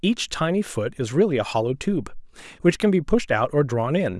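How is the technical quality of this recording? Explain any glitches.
The technical quality of this recording is good, with no glitches to explain.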